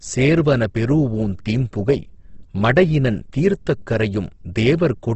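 Throughout, the speech sounds rough and grainy, with nothing above 8.2 kHz. This is likely Opus compression filling starved bands with noise at a low bitrate that fits 16 kbps.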